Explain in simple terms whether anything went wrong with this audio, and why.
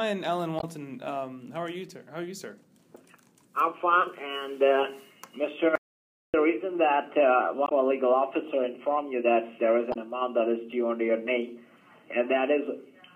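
Three brief glitches, at 0.56–0.64 s, 7.65–7.72 s and 9.90–9.97 s, come from damaged data in a compressed stream: the decoder misreads corrupted bytes and loses its place.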